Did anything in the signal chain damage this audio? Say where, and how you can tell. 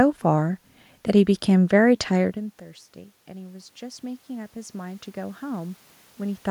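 Yes. Automatic gain rising in call processing: from 3.26 to 6.46 s the level climbs by about 10 dB after the input dropped about 21 dB. The room noise swells together with the voice, which rules out a talker simply moving closer.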